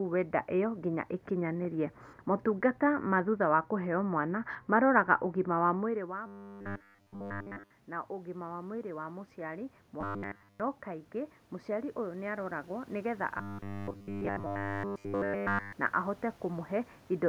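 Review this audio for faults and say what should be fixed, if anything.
Automatic gain rising, from 5.92 to 16.77 s. The talker's level at the microphone drops by about 16 dB just after 5.5 s, as if they moved back. The automatic gain control responds by raising its gain by about 14 dB, gradually over the next several seconds rather than at once. The voice comes back up, and the room noise swells along with it, so the background grows noticeably louder. To prevent it, keep the talker at a steady distance or slow and cap the gain control's upward travel so quiet stretches don't lift the noise floor.

Robotic sound from repeated short buffers, at 6.27 to 7.71 s, 10.01 to 10.60 s and 13.38 to 15.73 s. Fresh audio arrives too slowly, and the playback side fills the gaps by looping the most recent chunk. The likely cause is a loop of about 10 ms, which fits the steady 100 Hz buzz. In these stretches essentially all of the sound is repeated material, so the voice becomes a rigid metallic drone that only loosely tracks the speech. 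To prevent it, give the receiving end enough buffering and a steady delivery path that it never runs dry.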